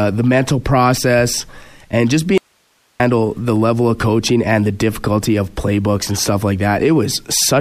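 Speech with an audio dropout to a faint residue from 2.38 to 3.0 s, after "mental process and just" and before "the level of coaching": about 0.62 s of only hiss roughly 45 dB down. It's likely a momentary signal loss with the path still live. It shows as a sudden near-flat waveform gap and a faint uniform noise band on a spectrogram.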